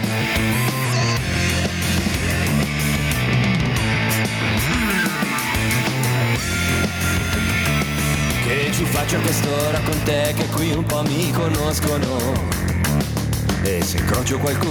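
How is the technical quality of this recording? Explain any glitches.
The recording has one fault, gain pumping, and it runs through the whole clip. The level keeps breathing up and down by roughly 5 dB. The likely cause is input gain set far too high, with a fast limiter or compressor pulling it back on every peak. Loud and soft passages sit too close in level. The result sounds squashed and restless.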